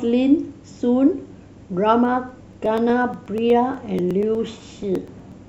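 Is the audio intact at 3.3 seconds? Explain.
No. From 2.05 to 5.32 s, periodic USB or driver dropouts skip roughly 4 ms of speech every 0.121 s. While speech is sounding, the gaps are heard as regular ticks.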